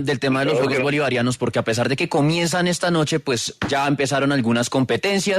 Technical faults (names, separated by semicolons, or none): none